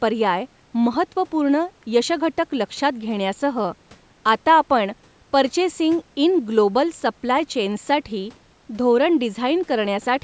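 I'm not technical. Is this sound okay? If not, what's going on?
Yes, no faults here; it's speech through a call's microphone processing, which trims the deepest bass and leaves nothing above about 8 kHz, both normal for a call.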